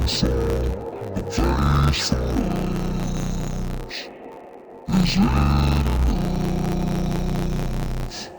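From start to finish the audio suffers from interleaved audio read as planar. Each block of alternating left and right samples is split in half, so each channel gets a half-speed copy of both sides. The blocks last about 10.67 ms, which fits a 512-sample block, so no clear octave drop emerges. Instead the sound turns dull and robotic, with a steady buzz near 94 Hz. A spectrogram shows vertical striping every 10.7 ms, and the waveform shows a matching periodic seam.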